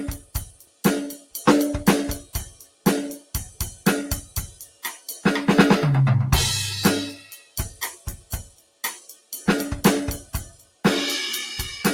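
A speech-tuned noise suppressor applied to music is active across the whole clip, treating sustained tones and decays as noise and swinging the level by roughly 15 dB, so the music pumps. Sound cut by the noise suppressor is clearest at 0.18–0.84, 1.14–1.43, 2.21–2.86, 3.17–3.86, 4.21–5.25, 7.15–9.47 and 10.22–10.84 s, where held material sinks by about 16 to 17 dB and tails are truncated.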